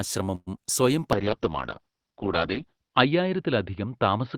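A speech recording in which, from 0.35 to 0.49 s, the sound stops moving forward and the last moment is drawn out as a fading buzz or hiss that sinks into about 40 ms of silence before the talk resumes where it left off. That is a call audio freeze, most likely packets stalling in transit until the jitter buffer ran dry. The receiver stretched what it already had across roughly 113 ms, so nothing is lost but everything after is pushed about 113 ms later. Shortly after, between 0.57 and 0.59 s, there is a brief smear where a sliver of sound seems to blur past. This is short concealed packet loss: about 20 ms of audio never arrived in time, and the decoder papered over part of the hole by extending the preceding sound before blending back into the real signal. From 1.13 s to the end the speech turns rough, watery and dull. A call bitrate drop took the encoder from 32 kbps down to 7 kbps, with the lowest rate held for about 1.85 s, so the coding grows coarse and the top end is cut from 20 kHz to 6 kHz, stripping away the crisp high frequencies.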